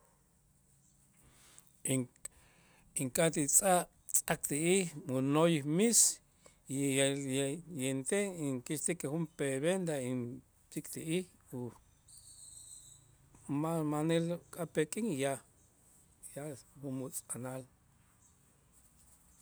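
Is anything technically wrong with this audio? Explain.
No, nothing here sounds technically wrong; it's just speech with no problems to point out.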